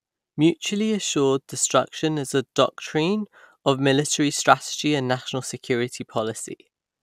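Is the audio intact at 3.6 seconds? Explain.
No. At 3.6 seconds the speech carries generation loss, as it does through the whole clip. The swirly, hollow texture and blurred consonant attacks are worse than a single 128 kbit/s MP2 pass would leave, so the likely cause is about three encode-decode cycles, each quantising on a shifted frame grid so the errors pile up. A spectrogram shows a hard ceiling at 16 kHz, and waveform transients look softened.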